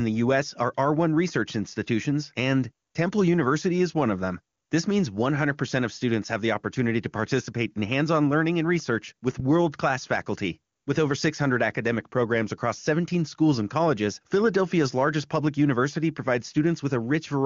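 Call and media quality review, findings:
No faults found: the speech shows the wideband AMR (HD Voice) coding character, with any coding damage at most faint, which fits the codec's top 23.85 kbit/s mode.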